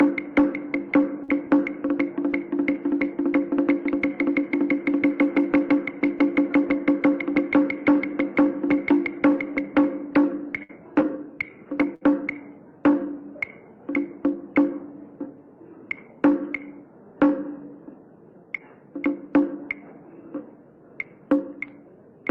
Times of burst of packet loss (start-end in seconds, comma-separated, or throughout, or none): 1.23-1.31, 10.63-10.81, 11.95-12.04